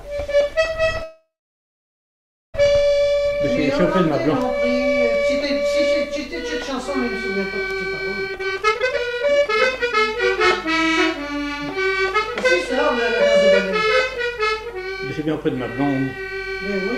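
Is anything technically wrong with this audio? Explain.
Yes, there are two kinds of fault.

A call audio freeze runs from 1.03 to 2.56 s, likely from delayed packets draining the jitter buffer. A fading continuation is followed by about 1.3 s of flat, empty waveform, adding a 1.5 s gap.

A jitter buffer speed-up, from pitch periods being removed to shrink the buffer, runs from 8.27 to 9.97 s at 182% speed with about 1.5 s cut, sounding rushed, and at 11.15–12.79 s and 14.37–15.28 s at 103–104%. On a spectrogram, pitch lines stay level while events crowd together.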